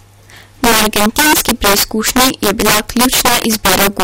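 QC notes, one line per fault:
Throughout: integer overflow. The signal is driven about 12 dB too hot, and roughly 7 percent of samples wrap from full positive to full negative instead of holding at the limit, so loud speech peaks burst into violent cracks far harsher than the flattened buzz of ordinary clipping.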